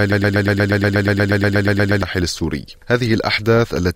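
From the very start until about 2.03 s, the audio is stuck in a broken-record loop: a fragment of about 0.12 s repeats exactly, back to back, 16 times, and is already cycling when the clip begins. A stalled player, encoder or stream likely kept resending its last buffered piece, so the audio for that stretch is lost.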